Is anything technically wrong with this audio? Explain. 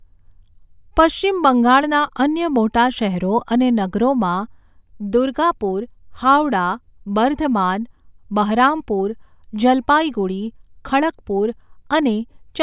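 No, nothing technically wrong stood out on listening to this speech recording.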